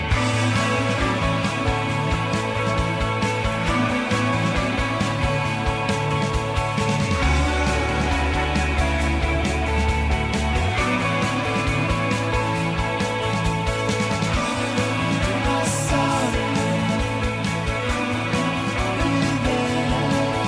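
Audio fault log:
No audible faults detected.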